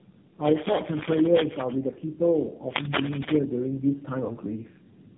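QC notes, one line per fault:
throughout: tandem speech coding. The audio sounds as if three low-rate speech codecs recoded each other's output in turn, piling up roughness and warble, with nothing above 3.6 kHz.
2.70 to 3.36 s: cable scratch noise. Dense, uneven scratching bursts roughly 5 dB louder than the signal, likely from a worn cable or connector shifting contact resistance.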